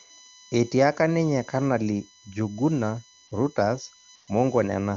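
A USB whine runs through the whole recording: a fixed-pitch tone built on the 1 kHz frame rate of the bus, with its strongest component up at 22 kHz, sitting roughly 20 dB below the speech. Current drawn in 1 ms frames is leaking into the audio through the power or ground path, adding a thin, constant whistle under everything.

At 3.27 s, AMR comfort noise replaces the real background for 40 ms, and again from 4.15 to 4.27 s for 120 ms. In both places the phone treated the input as silence and stopped sending speech frames, so the receiver filled the gap with smooth synthetic noise. The genuine background drops out and is swapped for a flatter hiss that switches in and out abruptly. The coding underneath sounds clean and wideband, which points to a high AMR-WB mode.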